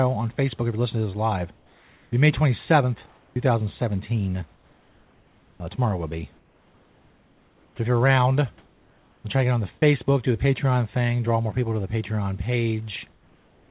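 At 1.56–2.12 s and again at 3.06–3.36 s, comfort noise replaces the background, about 3 dB and then about 6 dB quieter. The likely cause is discontinuous transmission halting during pauses while the receiver synthesises a smooth hiss. On a spectrogram the room's textured noise becomes an even, featureless wash.

From 4.54 to 5.78 s the sound is chopped by the voice detector, likely toggling transmission repeatedly. Soft stretches drop out. The waveform shows abrupt gaps and level steps, and the spectrogram alternates between detailed and flat noise bands.

Comfort noise fills 6.36–7.78 s as well, about 4 dB down. Its end overlaps an onset clipped by the voice detector at 7.75–7.78 s, where the first 30 ms were likely lost to a slow detector. The next sound begins abruptly, with a vertical edge in the waveform instead of a gradual rise.

Comfort noise returns at 8.58–9.24 s (about 2 dB quieter) and from 13.12 s to the end (about 3 dB quieter). 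Throughout, the spectrogram is empty above 4 kHz, as expected for the telephone-band call path, and the genuine room noise sits about 36 dB below the speech.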